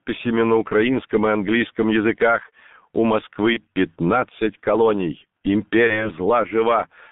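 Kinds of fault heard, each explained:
G.723.1 codec: heavy low-rate coding, fitting roughly 6 kbit/s, throughout; nothing above 3.6 kHz, hoarse muffled speech, blurred consonants. Unlike a plain band-limit, it also roughens the voice.
VoIP packet loss concealed by the speech codec: at 3.53 to 3.60 s and 5.87 to 6.11 s, fading stretched sound, not silent gaps, lingering after each lost 30 ms frame.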